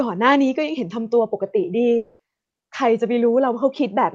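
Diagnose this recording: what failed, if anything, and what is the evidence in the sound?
Long network dropout, 1.97 to 2.21 s: speech gives way to a fading buzz, likely network packet loss concealed by the receiver; the lost 0.22 s never returns.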